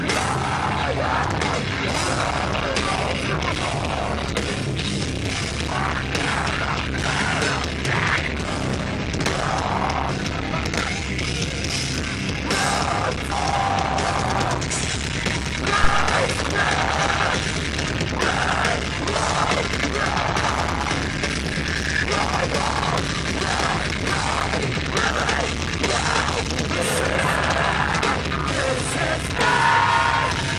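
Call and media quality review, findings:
Brief smeared blips where sound jumps ahead, at 3.51, 8.15, 10.08, 13.31 and 23.87 s, losing roughly 150 to 300 ms each. Decoder: compressed frames skipped, whole frames missing or rejected. Jumps fit 23.2 ms frames; frame overlap softens each join.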